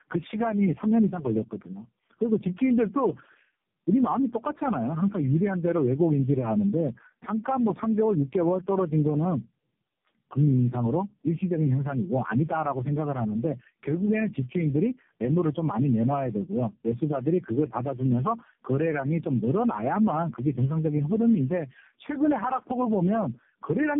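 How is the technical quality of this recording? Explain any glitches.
The technical quality is poor throughout. One fault runs the whole length: tandem speech coding. The speech crossed several narrowband links, each with its own coder, which sounds like four separate speech codecs, the last likely AMR-NB. At each hop the audio was decoded and then coded again. Every coder had to model artefacts left by the one before, so errors stacked up. Nothing remains above 3.6 kHz. The speech sounds muffled, rough and warbly.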